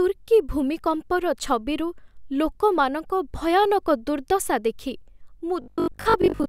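From 5.62 to 6.48 s, robotic sound from repeated short buffers: a rigid 50 Hz buzz, likely a looped 20 ms buffer, that still tracks the speech, unlike mains hum.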